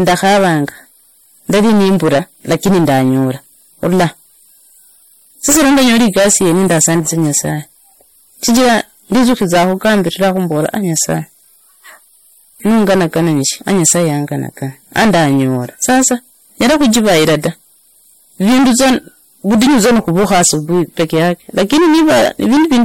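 Hard clipping runs through the whole speech clip. The signal is driven about 21 dB past what the stage can pass, so roughly a fifth of all samples are cut flat at the ceiling. The squared-off peaks add high harmonics, giving a harsh fuzz on every loud syllable.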